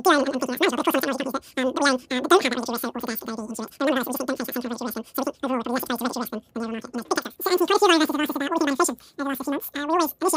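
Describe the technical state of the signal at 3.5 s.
At 3.5 s the speech plays with a wrong sample rate, as it does throughout: speed and pitch rise together by 2.76 times, about 17.6 semitones higher, which fits 16 kHz audio played at 44.1 kHz. Because tempo and pitch move in lockstep, it isn't a pitch shift or time-stretch.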